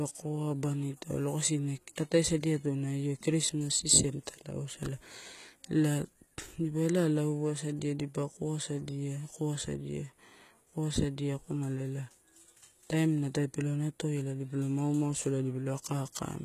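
From start to finish the speech carries plainly audible HE-AAC compression damage, likely from a low-bitrate stream somewhere near 20 kbps. The treble is rebuilt from copied lower bands, so s sounds come out gritty and lispy, and nothing reaches above 14.9 kHz.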